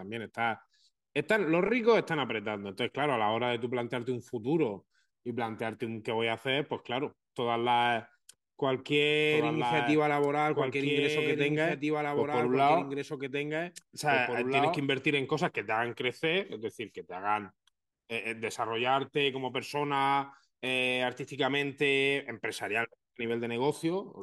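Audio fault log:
9.31–14.85 s, doubled audio track: a second full-band copy of the speech runs about two seconds behind the original, roughly 5 dB quieter. It carries no reverberant tail or added room colour, so it reads as a clean overlapping repeat rather than an echo, and it cuts in and out abruptly at both ends of the span. The likely cause is the same signal reaching the mix twice, once through a slower capture path.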